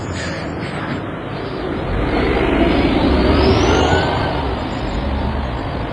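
From the first moment the audio sounds washy and ringing, with a hiss that swells and fades along with the signal. This is most likely WMA compression applied heavily. The transform codec spreads its quantisation noise over tens of milliseconds, so it smears around each event. At a rate that fits roughly 24 kbps, weaker spectral lines are discarded entirely.

From 1.81 s to the end, the pace suddenly jumps to about 1.73 times faster while the pitch stays exactly where it was. The result sounds rushed. This is likely a time-stretched section, where software compressed the passage to fit a shorter length and preserved pitch by cutting out short slices and butting the remaining pieces together.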